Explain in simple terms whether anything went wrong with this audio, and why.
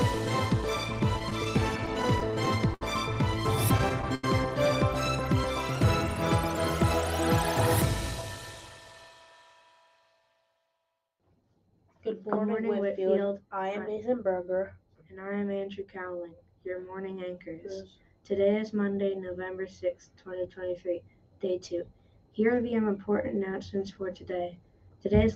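A couple of things went wrong. From 0.99 to 2.82 s there's repeated stalls (stutter): audio arrived late, so playback kept running dry, 13 times, and the player stretched the last bit of sound to cover each pause (longest 68 ms). Nothing's lost, it just drags. It happens again from 3.78 to 4.24 s, with 4 stalls up to 84 ms, about a quarter of that stretch.

Then from 8.02 to 9.1 s you get a jitter buffer speed-up. Too much audio had piled up waiting, so the player snipped out tiny slices, roughly a tenth of a second in total. That part runs about 10% fast and sounds a bit rushed, with the pitch unchanged.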